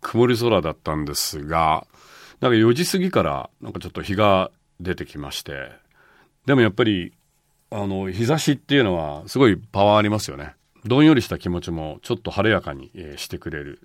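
No technical faults can be heard anywhere in this speech recording; the signal holds steady and continuous throughout.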